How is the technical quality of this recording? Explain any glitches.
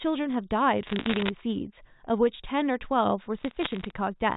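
The recording has telephone-band sound, cut off above 4 kHz, and is marred by two bursts of bit errors on a digital phone line. The first runs from 0.87 to 1.3 s. The second runs from 3.38 to 3.91 s. Bits in the digital stream were flipped, and each flip corrupts one sample. A hit on the sign or a high bit makes a sharp tick. Packed together, these ticks become crackle over the speech. The first burst is denser, around one percent of bits. The second is lighter.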